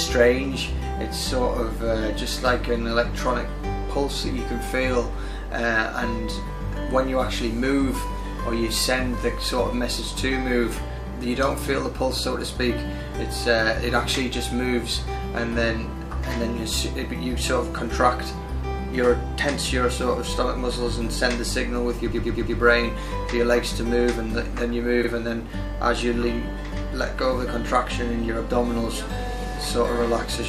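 Repeated frames stutter the audio twice. From 22.11 to 22.57 s, a 116.1 ms block plays four extra times. This fits a short run of compressed frames being written or sent again, so the decoder replays them and the audio runs 464.4 ms long there. At 25.03 to 25.08 s, a 46.4 ms block repeats once, adding another 46.4 ms.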